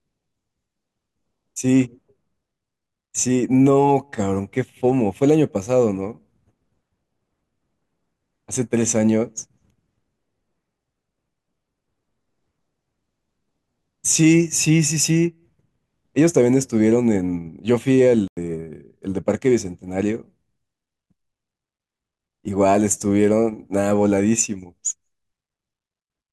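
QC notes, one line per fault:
18.28–18.37 s, corrupt frame muted: an abrupt gap of silence in the speech, about 94 ms long, where the decoder rejected what sounds like a single damaged frame and the player blanked it.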